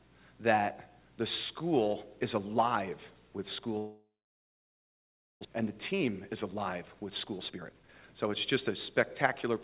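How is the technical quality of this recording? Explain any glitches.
The recording has two clear glitches, both typical of a network call. The band stops at 4 kHz with the usual coding noise of G.711 A-law at 64 kbps.

From 3.78 to 5.47 s the sound breaks off. The last sound is stretched into a fading buzz or hiss that dies into about 1.3 s of silence, and about a second of audio never returns. This is likely a long network dropout: packets stopped arriving and the receiver concealed the gap before playback resumed further on.

From 5.62 to 8.26 s the audio plays hurried, at about 120% speed with unchanged pitch. This is a jitter buffer speed-up. After the stall, delayed audio piled up in the buffer, and the receiver trimmed many short pitch-period slices, around half a second in total, to catch up.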